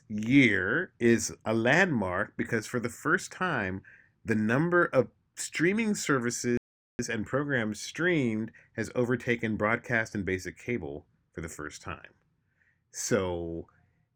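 At 6.57 s the speech stops dead for about 0.42 s, a rebuffering stall where playback ran dry, then picks up intact with "and programs streamed has".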